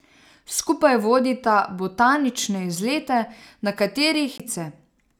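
Right near the end, at about 4.38 s, there's a CD skip. The speech drops out for a tiny mute, roughly a fiftieth of a second, and then carries on from a different point. The laser lost its place on the disc's spiral, probably from a knock or a flaw on the surface, and landed on another turn of the track. Playback picks up from there, so the speech jumps instead of flowing on.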